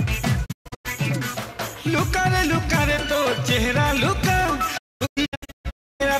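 Digital broadcast dropouts hit at 0.44–0.87 s and again at 4.76–6.02 s: the receiver lost good frames and muted with quick 20 ms fades, leaving scattered holes, the longest 128 ms and then 288 ms.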